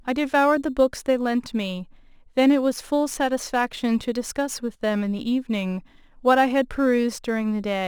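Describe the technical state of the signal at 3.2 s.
At 3.2 s the speech sits inside a crude rate conversion that runs through the whole clip. Samples were repeated without filtering, stretching by a ratio that fits a 44.1 kHz to 48 kHz change, leaving a gritty, inharmonic fizz roughly 30 dB below the speech.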